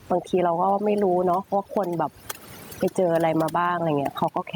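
Overdone noise removal runs through the whole clip: the noise reduction is set so aggressively that narrow frequency bands near its noise estimate are pulled almost to nothing. Quiet parts of the speech vanish with them, leaving a near-silent background with twinkling specks.

Gain pumping is also present from start to finish. The gain swings by something like 15 dB, and loud and soft passages sit squashed together. This is likely from input gain set far too high, with a fast limiter or compressor clamping down on each peak. The room noise itself sits about 37 dB below the speech.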